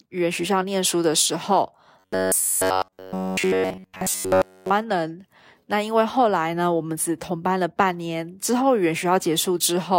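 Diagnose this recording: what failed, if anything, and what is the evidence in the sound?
It's the driver or buffer stage. From 2.00 to 4.71 s you get robotic sound from repeated short buffers: a stiff metallic buzz at 93.8 Hz throughout, loosely following the words. That fits a 10.7 ms block likely being looped while new audio was skipped.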